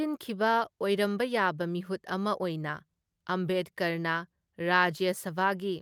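No dropouts, glitches, distortion or other transmission and processing faults turn up anywhere in the recording.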